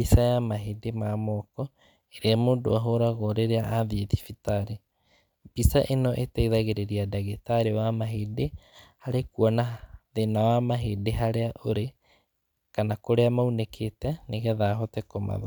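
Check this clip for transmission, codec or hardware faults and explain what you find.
No faults turn up anywhere in this clip.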